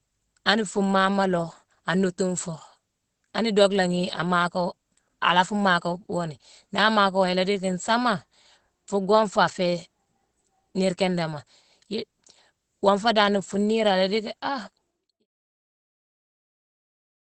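It's a speech clip with Opus voice compression throughout: nothing above 8.2 kHz, and a muffled, hoarse, slightly robotic grain that fits the SILK coder at roughly 12 kbps. The fade-out runs from around 14.5 s to 15.27 s.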